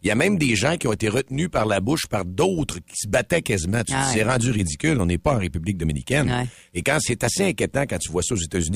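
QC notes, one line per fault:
Throughout: overlap-add ripple; mismatched frame overlaps pulse the speech level about 6 dB around 100 times a second, a metallic buzz with extra tones, seen as evenly scalloped waveform envelope.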